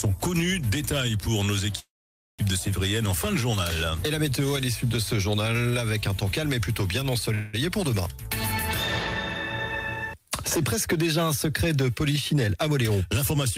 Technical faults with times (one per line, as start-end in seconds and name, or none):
1.79-2.41 call audio freeze
7.35-7.55 call audio freeze
12.33-13.34 jitter buffer speed-up